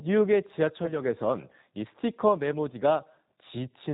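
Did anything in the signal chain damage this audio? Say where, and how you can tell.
Yes. The codec stage damaged it throughout. This is G.729 at 8 kbit/s. Nothing above 4 kHz survives, and the speech sounds plainly rough and synthetic.

On the network, VoIP packet loss was concealed by the speech codec from 0.86 to 1.02 s. About 20 ms went missing. The decoder stretched its last frame into a fading buzzy tone or coloured noise, and recovery lagged.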